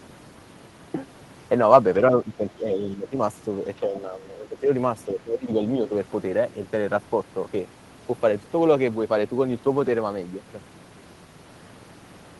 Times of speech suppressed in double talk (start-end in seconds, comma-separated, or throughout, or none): 2.11-3.13, 3.80-4.69, 5.06-5.61